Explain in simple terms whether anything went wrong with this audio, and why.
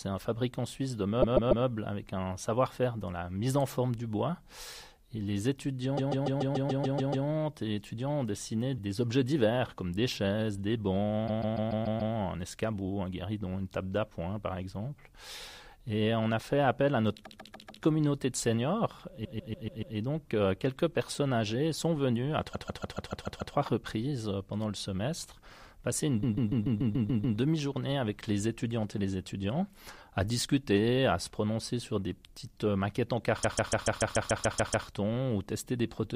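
The sound stutters eight times, at 1.21, 5.97, 11.27, 17.25, 19.24, 22.53, 26.22 and 33.42 s, replaying the same 0.14-second snippet three to ten extra times. These are repeated frames: a stored chunk was played again, stretching the audio.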